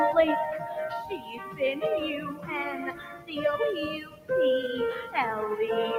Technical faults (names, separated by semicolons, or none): noise suppressor applied to music or sounds; sound cut by the noise suppressor